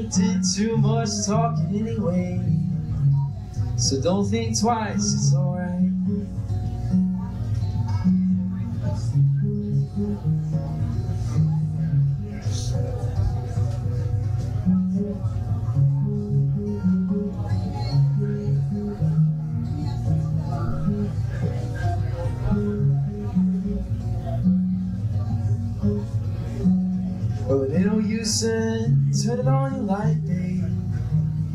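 Nothing goes wrong anywhere in this recording, so there's nothing here to flag.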